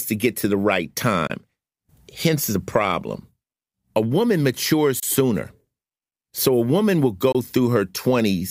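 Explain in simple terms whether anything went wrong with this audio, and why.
Three brief gaps break up the speech, at 1.27 to 1.30 s, 5.00 to 5.03 s and 7.32 to 7.35 s. Each is about 23 ms of silence, and after each one the speech picks up further along, as if it had kept going underneath. That pattern is a Bluetooth dropout, likely caused by a single audio packet failing to reach the headphones in time and being thrown away.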